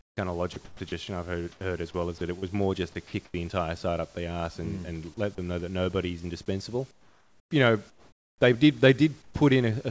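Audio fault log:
0.00–0.92 s and 2.18–2.47 s: sound chopped by the voice detector. The speech breaks up. In the first stretch about 380 ms is replaced. In the second, between "as well is" and "more just to", about 60 ms goes. The cause is likely a voice detector switching transmission on and off repeatedly. Quiet syllables and word edges fall below its threshold, and comfort noise fills them.
3.07–3.13 s: sound dropped by the voice detector. Right after "more just to", about 40 ms of speech is lost. It gives way to steady noise for 60 ms, then the speech returns. The likely cause is the detector mistaking quiet speech for background. It stopped sending, so the receiver played comfort noise until the detector triggered again.
1.52–1.61 s, 3.07–3.34 s, 6.91–8.41 s, 9.22–9.34 s: comfort noise in place of the background. In each gap the room tone turns into a flat, featureless hiss. The longest gap runs between "know that nobody's indispensable" and "they did", with about 1.1 s filled. 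The fill at 9.22 s drops about 7 dB, and at 1.52 s about 1 dB. This likely comes from discontinuous transmission, with synthetic noise standing in for the real background.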